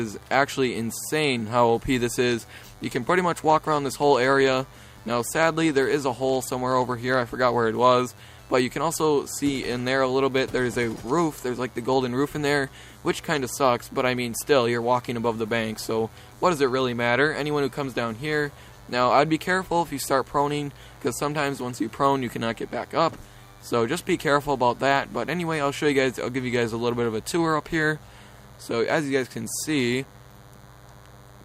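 A nearby DECT cordless phone's 10 ms radio bursts are rectified by the audio circuit, producing a steady, thin 100 Hz buzz with many harmonics throughout, about 30 dB below the signal.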